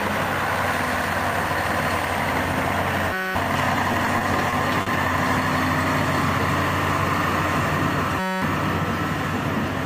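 The audio carries two system hang loop faults, at 3.13–3.35 s and 8.19–8.42 s. Each time a 5.33 ms slice repeats exactly, 42 and then 43 times, producing a steady 188 Hz buzz. That loop length fits a 256-sample buffer that kept cycling while the system froze, and roughly 0.2 s of audio is lost each time. Between 3.73 and 4.89 s there are repeated stalls (stutter) instead: six gaps, the longest 40 ms, are filled with about 110 ms of continued sound as the jitter buffer ran dry. Unlike the hang loops, these produce no pitched buzz and lose no audio; the sound simply drags and catches.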